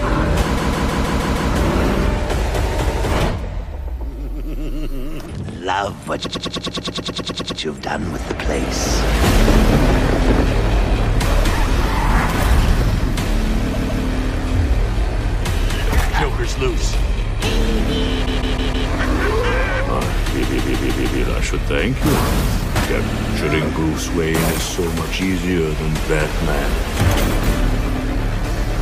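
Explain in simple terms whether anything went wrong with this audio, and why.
The audio stutters six times because of repeated frames: a short stretch of the compressed audio was played again and again, like a skipping CD. It happens at 0.56–1.50 s, 6.23–7.59 s, 13.73–14.04 s, 18.25–18.88 s, 20.42–21.20 s and 23.08–23.32 s. Most repeats loop a 157 ms chunk. The one at 6.23 s loops 105 ms and the one at 23.08 s loops 78 ms. Each repeat adds that time to the clip.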